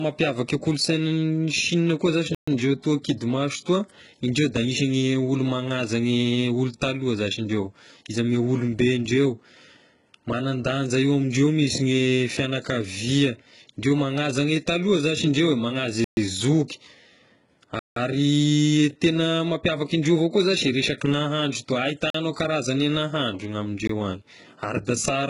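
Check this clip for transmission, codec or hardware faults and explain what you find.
Two kinds of fault are present: a hard bandwidth ceiling that runs through the whole recording, and five short dropouts to digital silence.

Low-bitrate audio saved at a high bitrate: Throughout the clip, nothing is present above about 11.1 kHz, so the speech sounds dull and lacks air despite the file's high-rate MP3 format. The likely cause is a very low-bitrate source, something like 12 kbit/s HE-AAC, later re-encoded as MP3 at around 304 kbit/s. The second encoding cannot restore the top octave the first one discarded. On a spectrogram this shows as a flat, sharp-edged ceiling at 11.1 kHz, with empty space above it for the full length.

Block of digital silence: The sound drops out at 2.35–2.48 s, between "koa zashy" and "ndreo toa kidy maso", and at 16.04–16.17 s, between "zashy indreo eh manaza" and "e zoky". 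Both gaps last 128 ms. Further dropouts occur at 17.79–17.96 s (171 ms, which fits an 8192-sample buffer), at 22.10–22.14 s (43 ms, between "zashy resaky nahandro toa" and "karazagne nahandro ny ame", fitting a 2048-sample buffer), and at 23.87 s. The output buffer was likely not filled in time, so zeros went out instead of audio. Each dropout starts and ends abruptly. Each is heard as a hole in the sound. In the waveform each appears as a flat line. On a spectrogram each is a blank vertical band.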